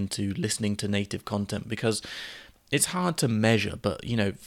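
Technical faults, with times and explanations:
No technical faults detected.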